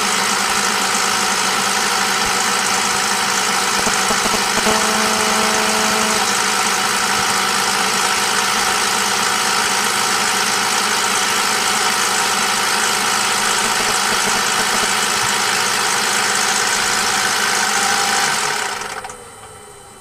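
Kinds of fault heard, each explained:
GSM signalling bursts: From 3.80 to 4.59 s there's a galloping dit-dit-dit of short buzzes at a 217 Hz rate, roughly as loud as the sound itself. A nearby 2G phone is sending short signalling bursts, and the audio circuitry rectifies the radio pulses into audible clicks.
GSM phone buzz: From 4.66 to 6.19 s a hard, raspy, harmonic-rich 217 Hz buzz holds steady, about 5 dB below the sound and unrelated to it. A nearby 2G phone in a call is transmitting 217 bursts a second, which the circuitry rectifies.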